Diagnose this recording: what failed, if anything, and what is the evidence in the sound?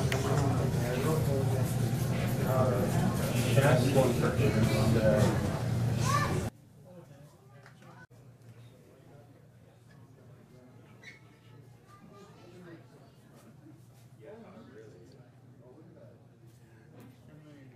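One channel inverted, from 6.49 s to the end: summed to mono, the sound drops by about 26 dB to a faint residue. The likely cause is a polarity-reversed leg in the analogue wiring, so content common to both channels cancels.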